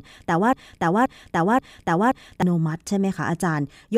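Speech clip with a broken-record loop from 0.53 s to 2.42 s: a 0.53 s fragment repeats exactly four times back to back, replacing the speech that should have played there. The likely cause is a stalled player, encoder or stream resending its last buffered fragment.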